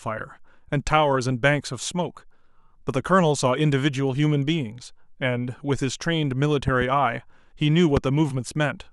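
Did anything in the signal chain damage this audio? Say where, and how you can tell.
Yes. Loud pops: a pair at 6.68–6.84 s, about 10 dB above the speech, then one at 7.97–7.99 s, about 15 dB; likely analogue-wiring voltage spikes.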